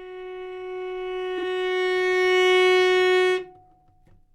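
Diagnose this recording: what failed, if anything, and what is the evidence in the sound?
The fault sits in the network or packet-reordering stage, just before the codec decodes. Between 1.38 and 1.43 s this everyday sound briefly garbles into a short flutter. These are frames out of order. Two neighbouring blocks, each about 23.2 ms long, were decoded in swapped order. That block length fits 1024-sample frames at 44.1 kHz. The stretch plays with its halves exchanged. No time is lost, so the timing stays intact.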